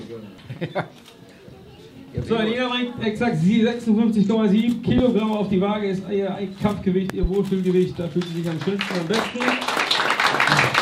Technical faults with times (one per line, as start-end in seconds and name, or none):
4.98-5.02 loud pop
7.10-7.27 loud pop